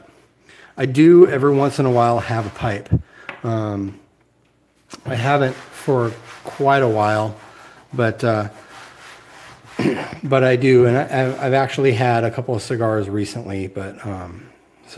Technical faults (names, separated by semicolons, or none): none